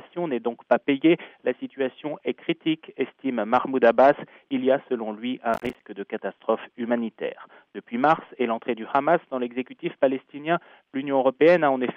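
From 5.54 to 5.81 s there's a burst of processor overload crackle: the machine couldn't keep up, so a run of short buffers, each around 10 ms, came up empty and dropped to silence with hard edges. You hear it as gritty tearing that clears once the load eases.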